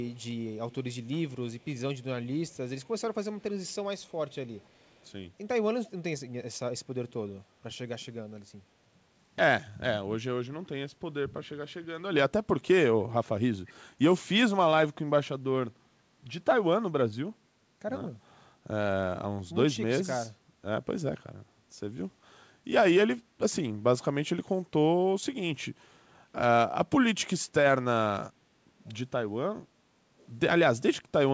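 An echo leak, likely from a far-end loudspeaker whose echo canceller let residue through, returns a very faint copy of the speech about 491 ms late. This happens at 0.03–0.24, 0.71–0.75, 1.6–1.65, 2.48–5.12, 7.09–7.13, 13.67–13.73, 28.79–28.95 and 30.18–30.29 s, mostly as brief scraps and once as a longer stretch.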